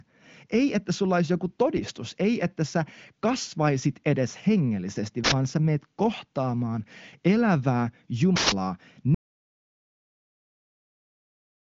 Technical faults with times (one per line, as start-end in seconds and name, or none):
5.24-5.32 uninitialised buffer
8.36-8.52 uninitialised buffer
9.14-11.60 audio dropout to silence